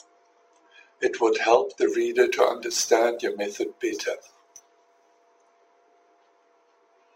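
A gritty hiss rides on the speech from 1.90 s to 5.27 s, thickening on louder and brighter syllables and dropping away in pauses. It is sample clock jitter: the converter's timing wobbles by a few microseconds, so steep waveform slopes are misread, leaving error roughly 25 dB below the signal.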